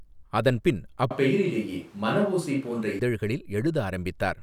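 At 1.11 s the speech abruptly turns roomy and hollow, losing bass, and stays that way until 2.99 s, when it snaps back to a close, full sound. This is most likely a switch to a distant microphone, with the close one dropping out. Loudness barely changes, but room noise rises to roughly 30 dB below the speech. The abrupt change at both ends and the reflections and noise arriving together set it apart from gradual reverb or simple tonal filtering.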